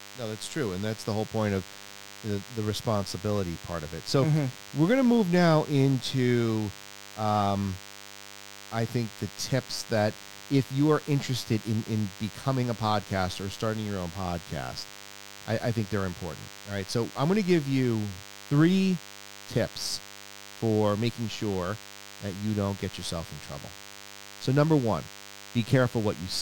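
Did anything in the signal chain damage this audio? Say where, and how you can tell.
Yes. Throughout the speech there is a DECT cordless phone buzz, entering at the analogue stage. A nearby DECT handset or base transmits a short radio burst every 10 ms, and the analogue audio circuitry rectifies each burst into a click, giving a steady 100 Hz buzz around 20 dB below the speech. Mains hum can also sit at 100 Hz, but it is rounded and tonal. This buzz is thin and rasping, with a dense stack of harmonics from those sharp-edged pulses.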